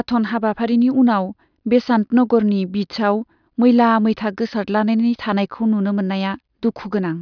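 A short bit of speech, and nothing technically wrong turns up anywhere in it.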